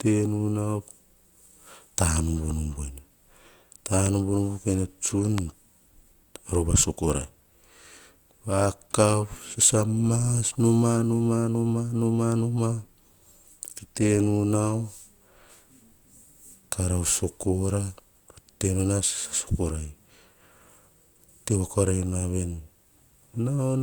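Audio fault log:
4.06 s and 5.38 s, loud pop: two single sharp pops sit on top of the speech, the first about 10 dB above the signal and the second louder at about 15 dB, while the speech carries on unbroken beneath both. Each is a brief pulse, likely from an electrical step such as a switch, plug or static discharge, shaped by the following circuits into a thump. Unlike a dropout click, nothing is missing from the sound.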